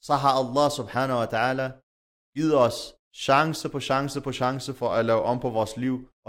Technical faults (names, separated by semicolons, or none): drift correction step